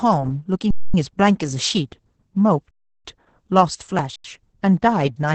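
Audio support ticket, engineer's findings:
Muffled, hoarse, slightly robotic speech throughout, nothing above about 8.6 kHz. Opus voice compression, SILK wideband mode near 10 kbps, coarsely coded excitation.

Speech freezes flat at 0.71–0.94 s, 2.71–3.05 s and 4.16–4.24 s, then resumes where it stopped, softly. Underrun with held sample: output buffer ran empty, converter held its last value.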